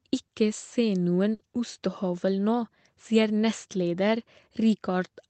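A speech recording carried over a WebRTC call path, with Opus coding limiting the audio band to about 8 kHz, has a burst of packet loss from 1.33 to 1.42 s. Because packets were lost, the receiver extends the preceding sound for 60 ms while fading it down, then resumes with 60 ms of the signal skipped.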